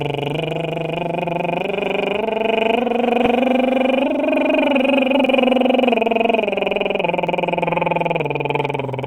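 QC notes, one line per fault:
1.25 s, 5.26 s and 7.27 s: overlapping chunks. The music is being handled in 2.0 s blocks that each start slightly before the previous one ends, so about 6.5 ms plays twice at the seam. That tiny repeat lands as a quick click or stutter in the music.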